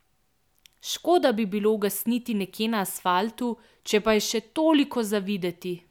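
No faults to report on this speech recording: nothing audible goes wrong at any point.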